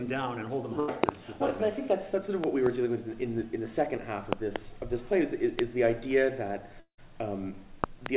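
Narrowband call audio with nothing above 4 kHz, consistent with a G.711 mu-law path at 64 kbps, carries three kinds of fault. A burst of packet loss at 0.80–0.90 s drops about 80 ms. The concealment extends the last sound as a short buzz or hiss that fades, then the audio resumes further on. Loud pops land at 1.04 s, 2.44–2.69 s, 4.33–4.58 s, 5.59 s and 7.84–8.08 s, mostly as closely spaced pairs, peaking about 20 to 25 dB above the sound. They are likely plug, switch or static transients. Unlike the network faults, the audio carries on underneath and nothing is lost. A long network dropout at 6.80–7.00 s, likely a stall in packet arrival, removes about 180 ms. The concealment fill decays into roughly 80 ms of plain silence before the audio returns, and that silent tail separates it from the shorter burst loss.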